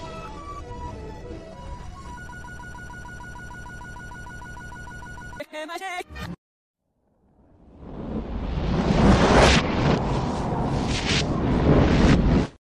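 Likely a stall in the player, encoder or stream, which kept re-sending the last fragment it held, producing a broken-record loop from 2.29 s to 5.40 s. A piece about 152 ms long repeats exactly, back to back, 20 times, giving a rapid stuttering pulse of about six or seven repeats per second. Whatever audio belonged in those three seconds never plays; the sound resumes after the loop with that stretch missing.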